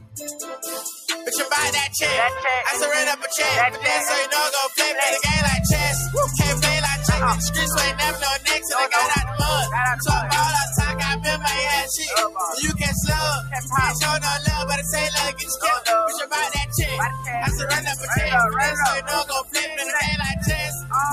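A speech-tuned noise suppressor applied to music or sounds runs throughout, mistaking sustained content for noise and swinging the level by roughly 5 dB, so the sound pumps audibly. Sound cut by the noise suppressor occurs at 0.0–0.15, 13.54–13.72, 15.32–15.87, 16.12–16.29, 16.49–16.76, 17.88–18.11, 19.01–19.87 and 20.67–20.93 s, with drops of about 6 to 14 dB that pull steady passages down and clip their decays short.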